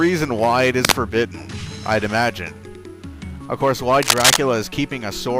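At 0.85 to 1.06 s a burst of dense, uneven crackle sits over the sound, at about the same level as the programme itself. A second, longer burst follows at 4.02 to 4.37 s, this time a little louder than the sound. Both have the ragged, rustling texture of cable scratch noise, likely from a worn cable, connector or control being moved so that its contact resistance fluctuated rapidly.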